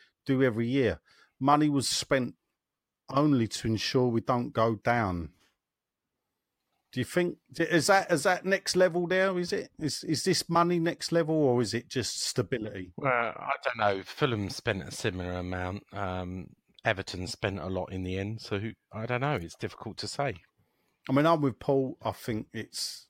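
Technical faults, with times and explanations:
No technical faults can be heard in this speech recording, and the signal stays continuous and stable throughout.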